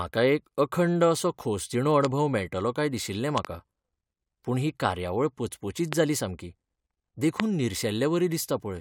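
Loud pops occur at 2.05–2.07 s, between "अखंड असो खोसदिणो" and "मेळटलो काय दिशिल्लें"; at 3.38–3.47 s, just after "मेळटलो काय दिशिल्लें", as a quick double pop; at 5.93–5.95 s, between "पूण ही कार्यावळ पचपचीत" and "जाली सामकी"; and at 7.40–7.42 s. Each is a sharp click-thump rising roughly 20 dB above the speech, the double one somewhat less, while the talking continues underneath. The likely cause is a brief voltage spike from a switch, connector or static discharge, shaped into a short pulse by the following circuitry.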